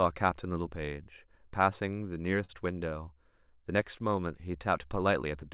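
From 1.9 to 2.51 s the speech hits repeated stalls (stutter): four times the jitter buffer ran dry, and the last sound was stretched to fill 76 ms in all, the longest gap 44 ms. Unlike packet loss, nothing is skipped; the speech drags and hiccups.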